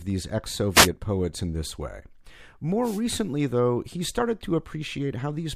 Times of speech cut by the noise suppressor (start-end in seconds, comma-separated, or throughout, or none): none